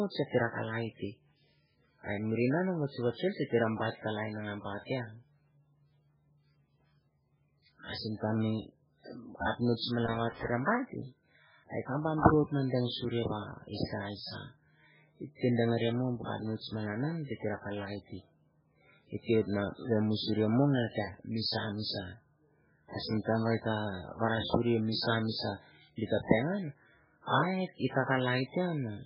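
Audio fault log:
Throughout: MP3 compression. The speech sounds watery and swirly throughout, and the damage is heavy. Nothing is heard above 5.3 kHz, so the treble stops at a hard ceiling. This is likely MP3 coding at a very low bitrate, with the level of damage pointing to something near 8 kbps. Short of bits, the encoder drops weak frequency lines. Those lines flicker on and off from frame to frame. Consonant attacks smear, and s sounds turn metallic.
10.07–10.48 s and 22.93–23.15 s: loose connector crackle. Two irregular bursts of crackle and scratching break into the speech. The first lasts about 0.41 s and ends just before "baht hei". The second lasts about 0.23 s. A worn or dirty contact in the signal path is making and breaking rapidly. Each break chops the signal into fragments. That rough, uneven chopping is what gives the bursts their scratchy texture.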